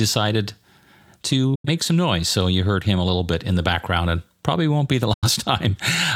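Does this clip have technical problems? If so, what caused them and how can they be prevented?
Yes. A digital broadcast dropout cuts the speech at 1.55 to 1.69 s, just before "some noise", and at 5.13 to 5.28 s. Each gap fades in 8 ms. About 85 ms of audio is lost in each, which fits two corrupted frames. The receiver muted until clean frames returned. A stronger signal or better antenna would prevent it.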